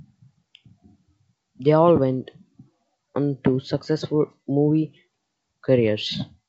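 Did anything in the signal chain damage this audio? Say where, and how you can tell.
No, nothing in the chain has hurt this speech: it went through G.722 wideband telephone coding at 64 kbit/s, which keeps the band up to about 7 kHz, and any trace that stage leaves is faint at most.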